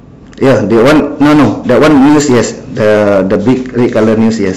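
Speech, and it's hard clipping the whole way through: the level was pushed about 16 dB past what the chain could pass, so the peaks get sliced flat on around a fifth of the samples, giving a harsh, fizzy distortion on every louder syllable.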